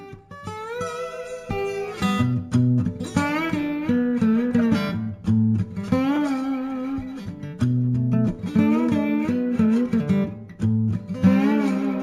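Throughout the clip there is imaging from linear upsampling. The rate was raised threefold by drawing straight lines between samples, which fits a 16 kHz original converted to 48 kHz. That crude interpolation leaves a faint mirrored copy of the spectrum between 8 and 16 kHz, roughly 35 dB below the signal, heard as a light metallic shimmer on bright, sibilant sounds. A spectrogram shows a dim reflected band above 8 kHz.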